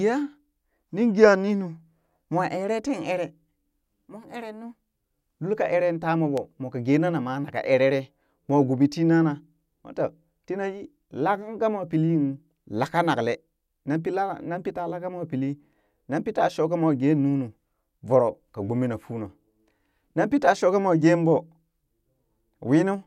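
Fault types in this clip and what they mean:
Loud pop: A single sharp pop lands at about 6.38 s, just before "mwaa ka gena". It is very brief and stands well above the level of the speech. The speech carries on underneath without a break. The likely cause is a sudden voltage step or pulse, such as a plug, switch, static discharge or driver glitch, added to the signal. The circuits that follow shape that pulse into the short, hard click heard here.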